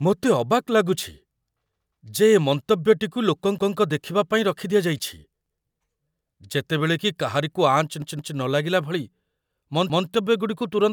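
A speech clip with a repeated buffer fault. A 0.17 s piece plays twice at 3.58 s, just before "ଦେଖିବା ପାଇଁ", then at 5.46 s and 9.90 s, and three times at 8.02 s. Each stutter has hard joins. The length fits an 8192-sample buffer.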